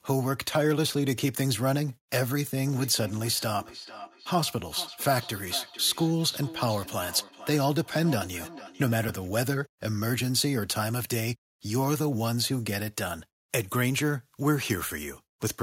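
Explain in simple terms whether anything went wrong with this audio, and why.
Two things went wrong. From 2.67 s to 9.33 s there is a feedback echo between two devices: a second device in the same room plays this talker's audio aloud, and the microphone picks it up again. Each phrase comes back about half a second later, quieter and thinner. Unlike ordinary room reverberation, which blurs smoothly, these are distinct repeats at a steady interval, because this device's echo canceller only removes sound from its own speaker.

At 9.09 s, near the end of that echo, there is a repeated buffer. A chunk of about 5 ms of audio didn't arrive in time, so the device played the previous chunk once more. Such a short repeat sounds like a tiny click rather than an audible stutter. What separates it from the echo is scale and timing: it is a single hard join lasting a few thousandths of a second, not whole phrases returning half a second later.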